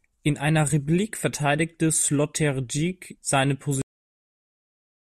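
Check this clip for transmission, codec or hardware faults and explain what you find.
One fault is present in this speech clip. Cut-off end at 3.82 s: the final stretch of audio was never written out or played, so the speech halts mid-sound and falls straight to digital silence with no natural decay, staying silent for the remaining 1.2 s.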